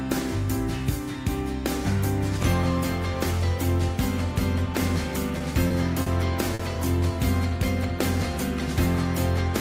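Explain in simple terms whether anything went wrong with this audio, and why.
Four brief hitches show up between 5.38 and 6.62 seconds: a short stall from a late packet each time, at 5.38–5.43, 5.68–5.73, 6.02–6.09 and 6.54–6.62 s. A piece of audio arrived late. The player had nothing new to play, so it held the last sound for 20, 20, 40 and then 50 ms. Then it picked up where it left off. Nothing is lost. You just hear a sound stretched, with a faint buzz or dip.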